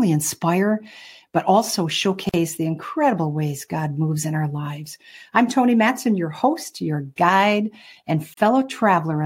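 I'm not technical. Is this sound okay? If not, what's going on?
No. There are two brief dropouts, each a gap at a join of encoded pieces. The first runs from 2.29 to 2.34 s, between "inspire but also" and "the incredible ways", lasting about 46 ms. The second comes at 8.34 to 8.37 s, about 34 ms. They fall six seconds apart. The recording was likely saved in separate chunks and stuck together. Each chunk kept a sliver of silence at its edge, so the speech briefly stops, then picks up exactly where it left off.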